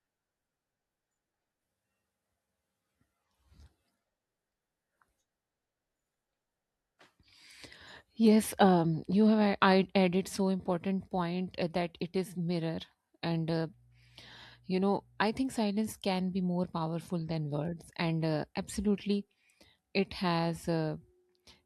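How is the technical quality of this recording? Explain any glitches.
One fault, a burst of mains hum from 13.26 to 15.22 s, between "it is mirror" and "think silence can be". A ground loop or stray transformer field couples the 60 Hz supply into the signal, giving a steady low drone with some low harmonics, sitting well below the speech.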